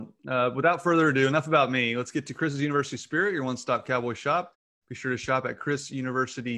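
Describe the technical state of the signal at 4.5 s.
At 4.5 s the speech signal is intact, with no dropouts, clipping or other faults.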